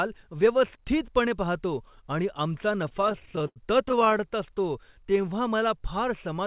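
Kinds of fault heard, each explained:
Repeated stalls (stutter): Packets kept reaching the receiver late, so its jitter buffer ran dry 25 times between 2.84 and 4.21 s. Each time it stretched the last sound to cover the wait, filling 327 ms in all, roughly a quarter of that stretch, with the longest hold at 89 ms. Nothing is actually lost, but the speech there hitches and drags in a run of short, stuttering holds.
Jitter buffer slow-down: From 5.10 to 5.87 s the buffer needed more reserve, so the receiver repeated single pitch periods and slivers of pause to build it up, adding 66 ms. Playback there runs at 92% speed while the pitch stays put, so the speech sounds drawn out, heard through the same narrow G.711 call band with nothing above 4 kHz.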